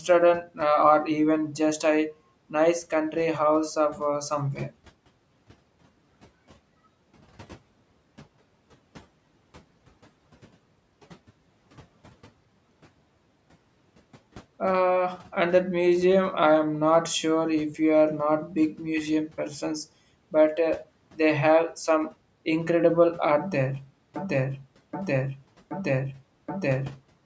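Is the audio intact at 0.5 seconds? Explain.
No. From 0.43 to 0.59 s the speech is cut by the noise suppressor: it mistakes part of the speech for background noise and turns it down along with the room noise, by about 10 dB at the deepest point, over roughly a tenth of a second in total. The sound there seems swallowed and faint. On a waveform the envelope dips, and a spectrogram shows the speech energy thinning into a pale gap before it returns.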